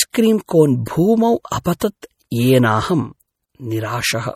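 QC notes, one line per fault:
Throughout, MP3 compression: the speech sounds watery and swirling, with metallic chirps on s sounds and onsets that blur rather than strike cleanly, and nothing is heard above 17.3 kHz. The likely cause is MP3 encoding at a low bitrate, with damage this plain fitting roughly 48 kbps. Starved of bits, the encoder cuts the treble at a fixed point and zeroes weak frequency components, which then blink on and off from frame to frame.
0.47–0.49 s, 1.50 s, 1.64 s, 1.80 s and 2.01 s, pre-echo: each sharp onset is preceded by a brief smear of hiss, lasting 23 ms at the first event and 18, 15, 16 and 18 ms at the later four, so the attacks sound soft instead of crisp. The codec spreads its quantisation noise across a whole transform block. When a loud attack lands late in a block, noise sized for that loud moment also fills the quiet stretch just before it.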